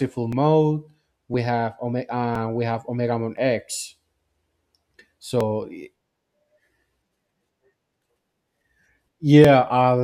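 Periodic USB or driver dropouts run from 0.33 s to 9.45 s, recurring every 1.01 s, around ten in all. At each one, something stalls the USB bus or audio driver and roughly 10 ms of speech is skipped outright rather than padded with silence, so the waveform jumps ahead with a discontinuity. The result is a steady, clock-like tick or small pop that lands on the beat of that interval whenever speech is present.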